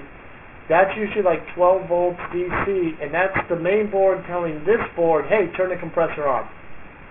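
Throughout the clip, the sample rate has been reduced without an anti-aliasing filter first removing content above half the new rate. The spectrum runs right up to a hard edge at 3 kHz, which points to a new rate of about 6 kHz. Everything that lay above that edge has folded back down as aliasing, landing at false, unrelated frequencies only around 15 dB below the real sound. The top end turns gritty, metallic and harsh.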